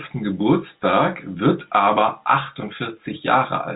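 No technical faults can be heard in this speech. The G.711 telephone coding is working as expected, holding everything below 4 kHz, with at most a faint noise that rises and falls with the speech level.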